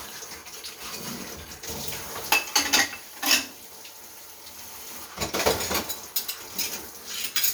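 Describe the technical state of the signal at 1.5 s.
At 1.5 s the signal is intact, with no dropout, distortion or other technical fault audible at that point.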